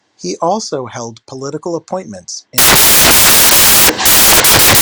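From 2.58 s to the end, the speech gives way to loud, harsh broadband noise. These are samples built from the wrong bytes: each value is assembled misaligned or byte-swapped, so the rapidly fluctuating low-order bits dominate and bury the actual signal.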